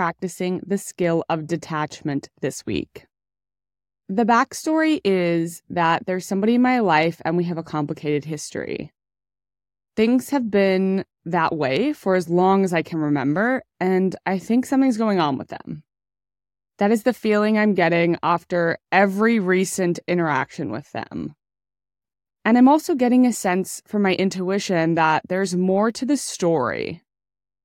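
Nothing to flag on this speech recording: no technical faults can be heard anywhere in it.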